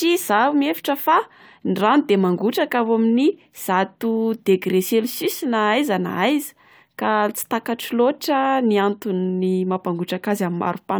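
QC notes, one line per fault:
No faults were found in this speech recording. There is nothing to flag for correction.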